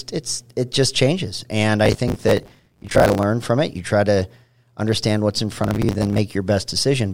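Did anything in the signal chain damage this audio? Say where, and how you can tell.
Yes: processor overload crackle at the driver/buffer stage, 1.85–3.23 s after "it just changes and" and 5.64–6.18 s. Missed deadlines replay stale, hard-edged fragments, fitting roughly 10 ms buffers.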